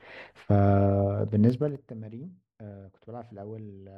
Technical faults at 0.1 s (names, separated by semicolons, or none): none